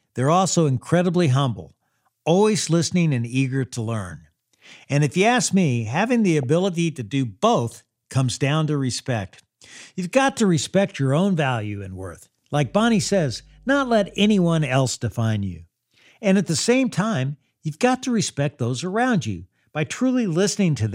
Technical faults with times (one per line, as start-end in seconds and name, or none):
6.43 DAB burbling
8.95-9.05 DAB burbling
12.56-14.71 mains hum